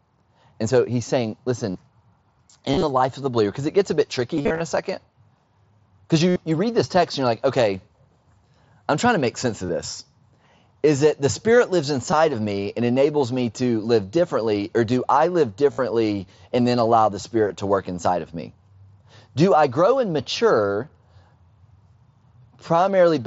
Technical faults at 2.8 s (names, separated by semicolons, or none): concealed Bluetooth headset packet loss